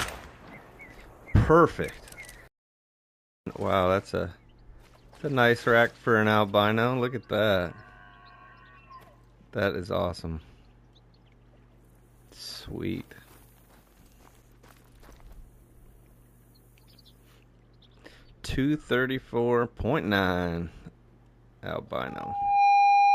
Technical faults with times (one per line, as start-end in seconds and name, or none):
22.06-23.14 loudspeaker feedback squeal